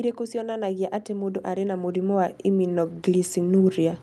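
Speech passed through a call codec, with an automatic gain rising fault from 0.31 s to the end at about 4 s. The gain control judged the input too quiet and kept raising its gain, so the voice and the background noise swell together. On a waveform the envelope widens steadily through those seconds, pauses included. On a spectrogram the noise floor brightens along with the voice, beneath a top edge near 12 kHz that fits the Opus codec.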